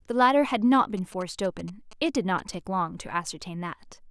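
From 0.97 s to 2.55 s, GSM signalling bursts get into the chain: a nearby 2G phone sends short groups of radio pulses while signalling to the network, and the audio circuitry rectifies that RF into the signal path. Under the speech this comes through as a galloping dit-dit-dit of short buzzes pulsing at about 217 Hz, sitting roughly 20 dB below the speech.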